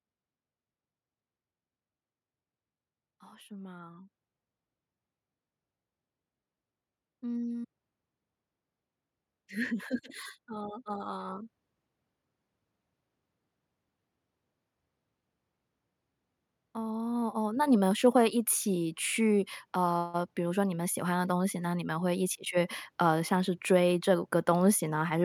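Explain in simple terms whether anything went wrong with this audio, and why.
Yes, something went wrong: twice, the recording's automatic gain rising kicks in. From 9.35 to 11.51 seconds, and again more strongly from 16.74 to 22.03 seconds, the level is nudged upward slowly, as if an invisible hand turns the volume knob. The telltale sign is that the speech and the background grow louder together. A speaker moving closer would raise only the speech, not the room noise.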